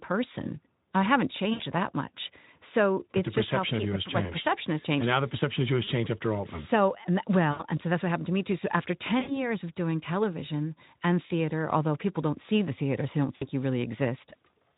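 Packets dropped out of this speech call at 1.53–1.62, 5.83–5.90, 7.52–7.63, 9.19–9.51 and 13.35–13.45 s, and the Speex decoder concealed the gaps as VoIP packet loss concealment. It extended the last pitch and filter while lowering the gain, so each gap turns into a fading buzzy or noisy smear lasting roughly 40–80 ms, consistent with 20 ms frames, and the voice stays weakened briefly afterwards.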